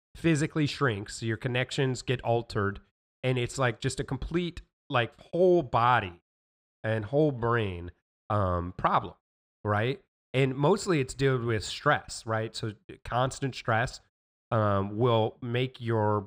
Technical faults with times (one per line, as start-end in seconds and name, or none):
9.74-16.26 crude rate conversion